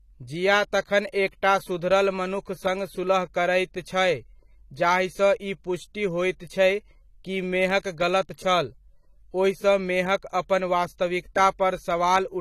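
From start to finish the speech sounds dull and smeared, with nothing present above about 14.1 kHz, so the top of the spectrum is simply missing. The damage is plainly audible throughout rather than confined to one moment. This is likely AAC compression, specifically AAC-LC: the encoder has lowered its cut-off and quantised the remaining frequency lines coarsely to save data, a result that points to a low bitrate around 32 kbps.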